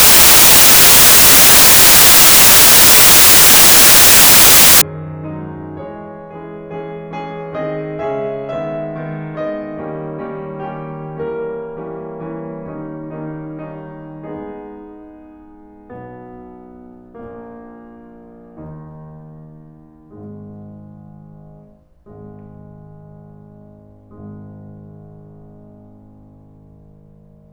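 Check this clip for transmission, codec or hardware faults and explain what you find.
The music opens with a fault in how the samples were read: from 0.0 to 4.82 s the samples are built from the wrong bytes. The reader assembles each sample misaligned or byte-swapped, so the rapidly changing low-order bits land in the most significant position. The result is loud, harsh broadband noise, close to white on the louder passages. Unlike broadband hiss or clipping, it comes from the samples themselves being misread rather than from noise added to the music or peaks being cut off.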